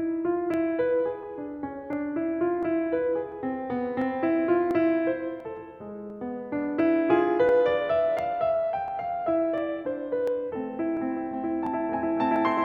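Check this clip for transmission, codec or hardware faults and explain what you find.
There's one fault in the music: clock drift buffer slips, running from about 0.54 s to 12.36 s. A click lands every 0.695 s, roughly twenty of them. The likely cause is two devices on separate clocks, off by something like 500 ppm, so the buffer between them creeps full or empty until a small block of around 15 samples gets dropped or repeated. That steady interval is what makes the ticking so regular.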